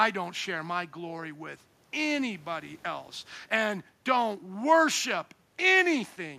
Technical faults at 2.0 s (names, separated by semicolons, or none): none